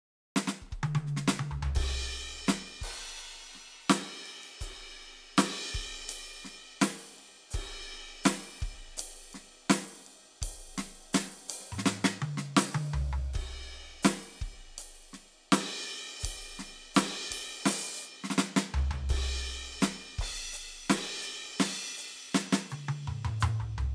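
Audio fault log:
No audible faults detected.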